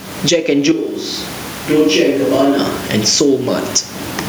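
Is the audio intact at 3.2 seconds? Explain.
No, 3.2 seconds sits inside gain pumping that runs through the whole clip. Every time the speech gets loud, the level gets yanked down, and in the gaps it swells back up by something like 20 dB. The room noise sits well under the speech. That pattern points to the input gain being set way too high, with a fast limiter or compressor likely clamping down on each loud bit, so everything comes out squashed.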